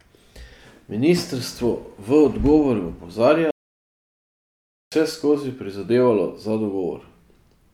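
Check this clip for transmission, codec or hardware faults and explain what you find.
One fault is present. From 3.51 to 4.92 s there is a playback stall. The player likely starved of data. The speech stops mid-flow for 1.41 s, then resumes.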